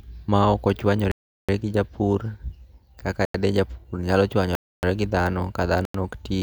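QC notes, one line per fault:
1.12–1.49 s, 3.25–3.34 s, 4.55–4.83 s, 5.85–5.94 s: block of digital silence. The speech drops to silence for 0.37, 0.09, 0.28 and 0.09 s with no fade. The lengths fit whole multiples of a 4096-sample output buffer not filled in time.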